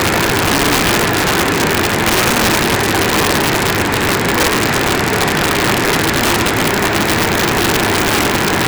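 Integer overflow runs throughout: with the level pushed about 6 dB too hot, a few percent of samples exceed the integer limit and wrap to the opposite sign instead of clamping. Loud sounds break into harsh cracks, seen as sharp vertical spikes and broadband flashes.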